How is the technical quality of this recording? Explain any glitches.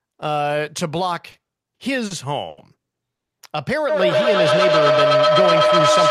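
The recording is poor, with four distinct network and acoustic faults from 1.3 s onward.

From 1.31 to 2.12 s, repeated stalls (stutter): five jitter-buffer underruns, up to 50 ms each, filled by repeating sound. On a spectrogram they show as smeared, stretched patches.

From 2.48 to 2.59 s, a short stall from a late packet: the last sound is held for 90 ms. It shows as a flat, frozen band in the spectrogram.

From 3.15 to 3.33 s, a call audio freeze: 160 ms of silence, then the audio resumes. This is likely a packet delay that emptied the buffer. The waveform shows a flat gap.

From 3.89 s to the end, feedback howl: a microphone-loudspeaker loop builds a tone around 1.5 kHz, pulsing about ten times per second and peaking about 7 dB above the speech. It appears as a bright horizontal line.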